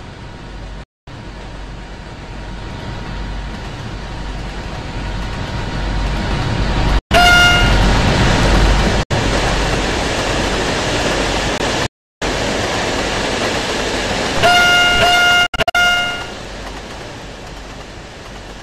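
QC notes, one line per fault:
0.83–15.76 s, Bluetooth dropout: silent gaps at 0.83–1.08, 6.99–7.12, 9.03–9.12, 11.86–12.23 and 15.46–15.76 s, the last broken into scattered short holes with the longest about 70 ms. Sound cuts out and returns further along, as if it had kept playing, likely because audio packets reached the headphones too late and were discarded.
11.58 s, block of digital silence: about 20 ms of sound cuts out to silence and back with no fade, heard as a short hole.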